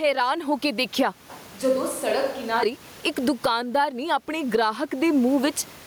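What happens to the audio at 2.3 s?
At 2.3 s the speech is inside a switch to a distant microphone, running from 1.30 to 2.63 s, just after "ਹੋ ਕੇ ਦੇਖਿਆ". The close microphone's signal has most likely dropped out, so a farther pickup carries the sound. It turns roomy and hollow at once, thinner in the bass and around 10 dB quieter. Room noise sits nearer the speech.

Gain pumping also runs through this moment, as through the whole clip. The input gain is likely set far too high, and a fast limiter clamps down on each loud sound. The level swings by roughly 20 dB. Loud and soft parts sit closer in level, leaving the speech squashed.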